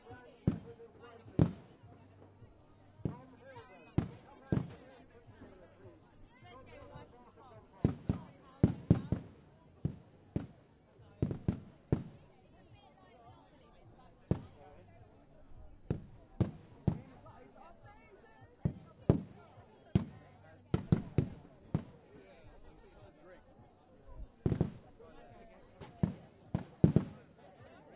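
Listening through the recording of everyday sounds, nothing stood out as a technical problem at any point.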